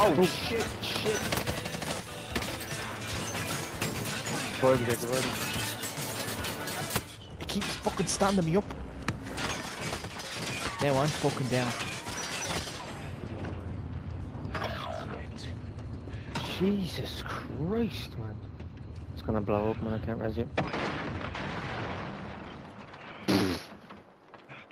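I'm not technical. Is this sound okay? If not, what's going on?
Yes, the sound is okay. Nothing in it stands out as a problem, so there's nothing going on that needs explaining.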